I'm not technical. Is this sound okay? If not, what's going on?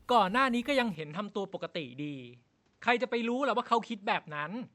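No. From 0.95 s to the end, the speech abruptly turns duller and a little quieter, with new faint background noise underneath and no gap at the change. That points to an input switched to a poorer device.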